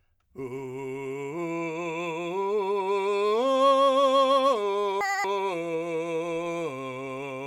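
A music clip, and from 5.01 to 5.24 s the audio is read two samples at a time, so that stretch plays at double speed, an octave up.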